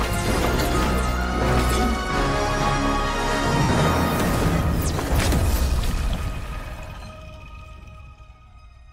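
At 0.88 s a brief gap of lost LE Audio frames is concealed: the decoder repeats the previous spectrum with scrambled phase, so one 10 ms slice turns to a noisy smear instead of a click. From 3.63 to 3.71 s a longer loss, with a continuous stretch of about 70 ms that fits several consecutive missing 10 ms frames, spreads into hiss-like blur that fades downward rather than cutting off. A plain dropout would go straight to silence.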